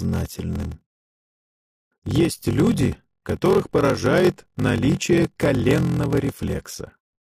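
From start to end, one stage is handing over shorter blocks than the next stage reads, and the shortfall in each block is filled with zeros. This block size mismatch (padded) puts a brief silent gap into every block, heard as a steady buzz at about 43.1 Hz, which fits 1024-sample reads at 44.1 kHz. The audio also runs slow, at 0.861 times normal speed, while its timbre stays about where it should be.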